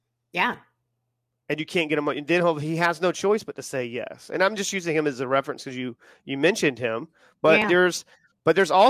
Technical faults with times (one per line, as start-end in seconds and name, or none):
none